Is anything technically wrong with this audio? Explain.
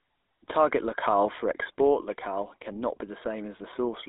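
Yes. Throughout, the speech carries GSM full-rate codec damage: the vocal tract is modelled and driven by a sparse, regularly spaced pulse excitation, which fits a 13 kbps coder. The result is a plainly audible buzzy, gravelly roughness, band-limited to roughly 250 Hz–3.7 kHz with nothing above 3.8 kHz.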